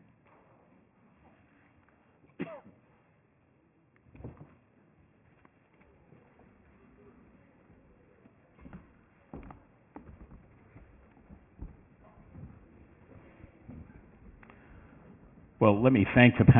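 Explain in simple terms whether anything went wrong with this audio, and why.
Something went wrong for the whole clip: aliasing. The sound was squeezed into a much lower sample rate without first removing the high sounds that rate cannot hold. The sound points to a drop to about 6 kHz, so nothing above 3 kHz fits. Those high parts fold back down as false tones that don't belong. Hissy and bright sounds turn gritty and metallic, and the top end seems cut off sharply at 3 kHz.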